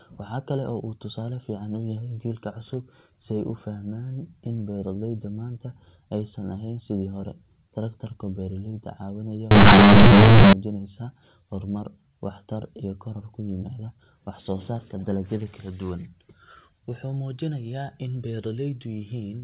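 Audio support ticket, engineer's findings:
Companded audio read as linear, 9.51 to 10.53 s: abrupt very loud, buzzy distortion and heavy noise through pauses. The decoder stage likely passed mu-law bytes out as plain 8-bit samples. Each sign change swings half-scale. Unlike clipping, quiet stretches blow up too.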